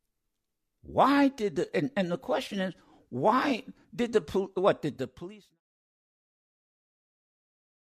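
No technical faults can be heard in the speech, and the level eases down in a smooth, deliberate fade-out from around 4.5 s to 5.61 s, with no click or hard edge.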